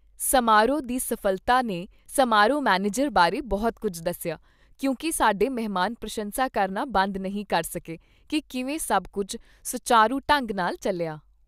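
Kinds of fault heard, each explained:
Mains hum: power-line energy leaking into the signal path, typically through a ground loop or a nearby transformer. Here it sits as a steady 50 Hz tone from 3.19 to 4.69 s, roughly 35 dB below the speech, faint but audible under it.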